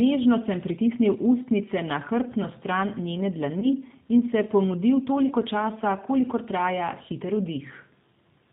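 The whole recording is carried through a G.729 codec at 8 kbit/s, and its damage is plainly audible. The speech is rebuilt from a vocal tract filter, a pitch predictor and a few pulses per 5 ms subframe, with nothing above 4 kHz, so it is band-limited, slightly rough and synthetic, and consonants lose their crispness.

From 3.60 to 3.68 s, just before "in se", VoIP packet loss concealed by the speech codec appears. About 20 ms of audio is missing, which fits a single lost packet. The decoder fills the gap by extending its last pitch and filter at falling gain, giving a short buzzy or noisy smear, and the speech stays weakened briefly afterward as the decoder's state recovers.

The same concealment recurs from 5.28 to 5.33 s, again about 20 ms of lost audio, consistent with one packet, heard as a brief smear and a weakened or distorted restart.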